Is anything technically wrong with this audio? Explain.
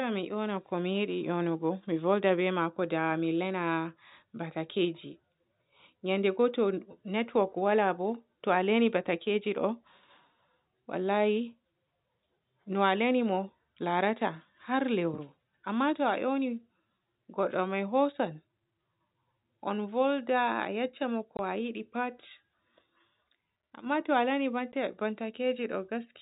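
Yes. There is packet loss filled with silence, at 21.37 to 21.39 s and at 24.72 s. Lost packets were replaced by silence, leaving holes of 20 ms and 10 ms with hard edges. This fits 10 ms packets. The speech stays in the G.711 telephone band, with nothing above 4 kHz.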